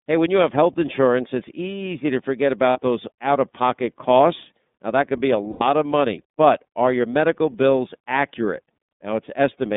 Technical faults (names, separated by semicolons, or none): iLBC codec; lost iLBC frames